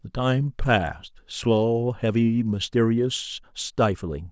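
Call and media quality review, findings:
No faults heard in the speech; no action required.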